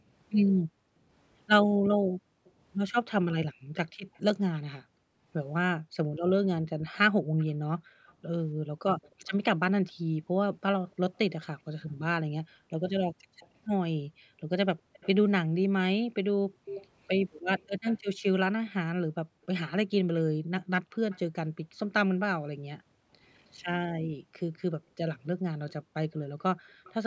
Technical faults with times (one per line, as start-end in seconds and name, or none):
0.00-10.63 background gated by the echo canceller
2.45-4.20 echo leak
7.38-11.45 echo leak
12.43-16.65 background gated by the echo canceller
13.40-18.70 echo leak
19.15-26.84 background gated by the echo canceller
20.94-21.19 echo leak
25.70-26.94 echo leak